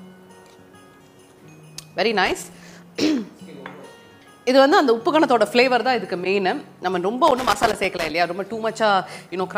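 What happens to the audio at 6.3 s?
A corrupt frame decoded just before the point asked about, from 6.24 to 6.26 s. One compressed frame arrived with flipped bits, and the decoder played it instead of concealing it. The damaged gain and spectral codes put energy at frequencies that don't belong there, so for roughly that single frame's length the audio turns into a brief, sharp blip or chirp, fairly loud at around -10 dBFS, before normal decoding resumes.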